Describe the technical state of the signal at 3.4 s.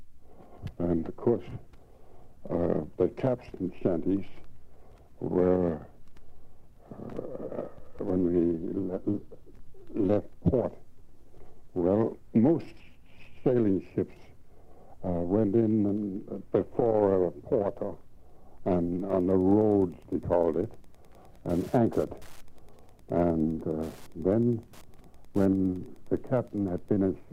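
There is no audible fault at 3.4 s; the signal at that moment is intact.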